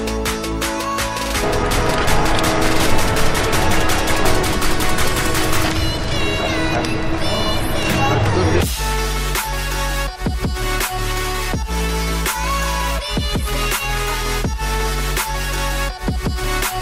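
No technical faults are audible.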